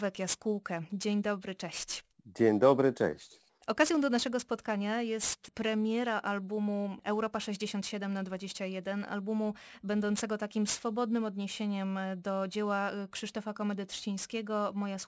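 Speech with aliasing throughout: a downsample to 16 kHz without filtering folds energy from above 8 kHz back down as gritty sibilants, roughly 15 dB below the voice, with spectrogram energy running hard up to 8 kHz.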